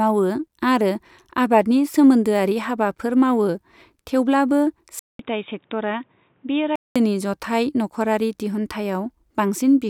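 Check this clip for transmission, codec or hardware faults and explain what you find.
One fault is present. From 4.99 s to 6.96 s the speech turns dull and boxy, with nothing above 3.8 kHz. It drops roughly 5 dB in level and gains a faint new noise floor about 40 dB down, after a 200 ms silence at the switch. This is likely an input switched to a poorer device, such as a headset call profile. A codec bandwidth drop would only narrow the band. Here tone, level and noise all change together.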